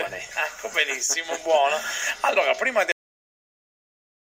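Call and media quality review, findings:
Cut-off end at 2.92 s: final buffers never written or played out. Sound stops mid-event, drops straight to digital silence with no decay through the end.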